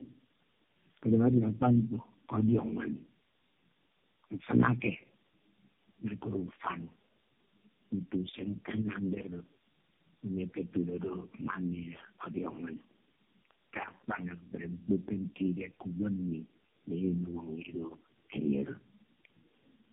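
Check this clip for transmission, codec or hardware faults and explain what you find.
There's one fault, present for the whole clip: tandem speech coding. The speech sounds like it passed through about four low-rate speech coders in a row, each re-encoding the previous one's already damaged output. So it's rough, muffled and warbly, with nothing above 3.7 kHz.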